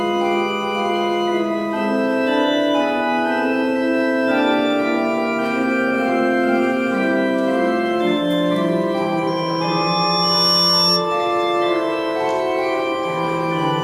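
At 9.27 s a loudspeaker feedback squeal kicks in: the mic is hearing its own speaker, and around 5.5 kHz the loop gain tops one, so that tone feeds itself. It swells over roughly a second to sit about 5 dB above everything else, then drops out at 11.07 s.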